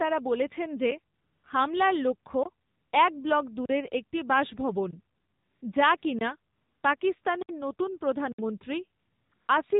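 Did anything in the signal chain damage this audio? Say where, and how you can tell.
Yes. The AMR narrowband mobile codec damages the whole clip, at the codec stage. Nothing above 4 kHz survives, and the speech has a plainly buzzy, synthetic edge. That comes from the codec rebuilding each 20 ms frame from a vocal-tract model excited by a handful of pulses rather than carrying the waveform itself. The degree of coarseness points to a low mode, around 7.4 kbps.

AMR comfort noise appears nine times between 1.1 s and 9.5 s, in gaps lasting from 20 ms to 460 ms. The first falls between "বলছেন যে" and "হামলার লক্ষ্য", and the longest runs from 5.16 s to 5.62 s, just after "একটি বাসভবন". In each gap the real background gives way to a smooth, steady hiss that switches in and out. The sending side judged those moments silent and stopped sending speech frames, so the receiver filled them with noise generated from a rough level and spectrum estimate.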